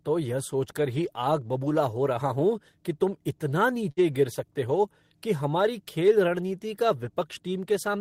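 A burst of packet loss hits at 3.91 to 4.00 s, between "हूँ की तुम इतना" and "गिर सकते हो कि". The receiver stretches the last speech sound for about 54 ms, fading it, then resumes with roughly 60 ms of speech gone.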